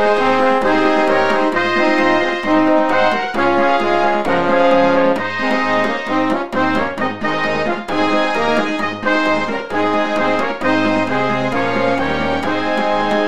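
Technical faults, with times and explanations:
No technical faults can be heard anywhere in this audio. There is nothing to list against any time.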